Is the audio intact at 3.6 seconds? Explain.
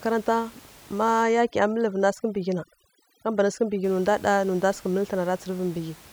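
No. At 3.6 seconds the clip is inside a stretch of overdone noise removal running from about 1.23 to 3.84 s. The noise reducer cuts frequency bands near its noise estimate too hard. Quiet speech detail goes with them. The room noise, about 25 dB below the speech, drops and breaks up into twinkling specks.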